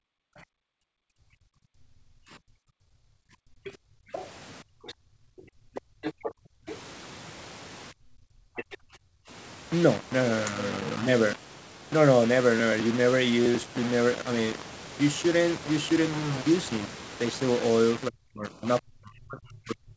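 The whole clip has a grainy, signal-following grit with noise only about 15 dB under the sound, likely low bit depth without dither, around 5 bits, simply rounded. Right at the start, from 0.0 to 0.19 s, the background is gated by the echo canceller, with the room sound pulled down by about 40 dB while the far end plays. From 0.47 to 2.9 s the talker keeps dipping by up to about 40 dB, likely speech suppressed in double talk, because the canceller can't tell the near voice from the loudspeaker echo and ducks both. From 3.18 to 4.12 s the background is gated again, by about 35 dB. Overlapping that, from 3.64 to 6.76 s, the other side's voice leaks through at about 10 dB below the speech, likely because the echo canceller left some of the loudspeaker in the mic. More double-talk suppression follows at 4.62 to 6.68 s and 7.91 to 9.3 s, each with dips of about 35 dB. A short scrap of the far-end voice leaks through at 8.56 to 8.77 s, about 15 dB down. 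From 18.08 s to the end the speech is ducked once more, by up to about 40 dB.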